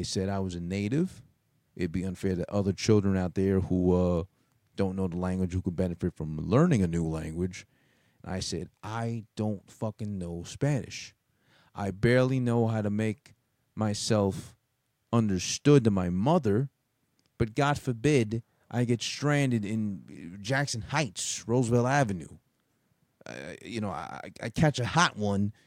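No faults are audible anywhere in this speech recording.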